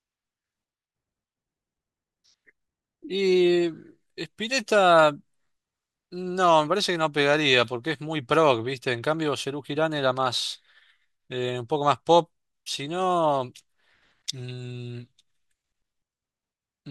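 No technical faults can be heard anywhere in this recording of speech, and the signal holds steady throughout.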